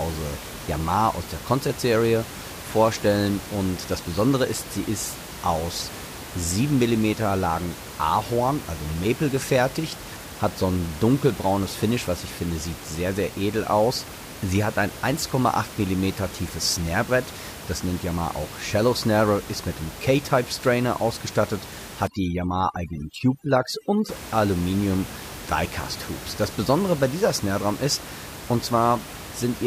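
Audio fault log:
22.07–24.09 s, overdone noise removal: an over-aggressive noise reduction pulls bands near the noise estimate down to nothing, leaving twinkling specks in near-silence.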